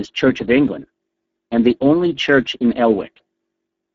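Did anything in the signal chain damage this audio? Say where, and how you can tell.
Yes, codec stage: Speex coding at what sounds like roughly 10 kbps starves the excitation, leaving speech hoarse throughout. A spectrogram shows noisy fill with nothing above 7.6 kHz.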